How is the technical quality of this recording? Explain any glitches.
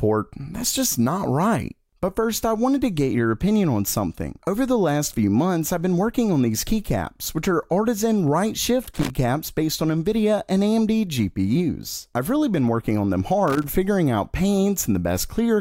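The recording has two short glitches, both loose connector crackle, at 8.83 to 9.10 s and again at 13.48 to 13.69 s. A worn or dirty contact in the cable path is making and breaking as it shifts, chopping the signal on and off. Each burst is an irregular scratchy rasp of about a quarter second. Its uneven spacing and clustering set it apart from the evenly timed ticks of a digital buffer fault.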